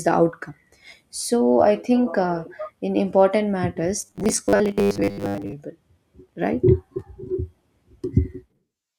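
Robotic sound from repeated short buffers runs from 4.02 to 5.53 s, starting right after "think uh in important". The speech collapses into a rigid, metallic buzz pitched at 100 Hz that only loosely tracks the words. That pitch fits a 10 ms chunk being replayed over and over, likely because new audio arrived too slowly and the playback side filled the gaps by looping the last buffer. About half the material in that stretch is repeats rather than real audio.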